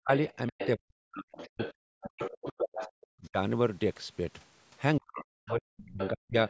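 The speech is suppressed in double talk from 0.0 to 0.11 s, again from 0.49 to 1.61 s, from 1.98 to 3.37 s, and from 4.99 to 6.36 s. The talker dips sharply, by as much as about 40 dB, and drops out in pieces, likely because the echo canceller could not tell the near voice from loudspeaker echo and so attenuated everything. On a waveform the envelope collapses to near-flat stretches, and a spectrogram shows speech energy fading to dark gaps.

The other side's voice is leaking through from 0.32 to 0.67 s, from 1.34 to 2.92 s, and from 5.48 to 6.09 s. A second voice sits about 10 dB below the talker, likely echo that the canceller failed to remove fully. A spectrogram shows faint harmonic traces that are independent of the main voice and overlap the suppressed regions, within a band that stops at 8 kHz.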